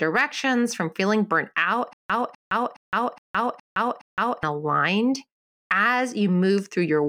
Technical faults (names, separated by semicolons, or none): stutter with silent gaps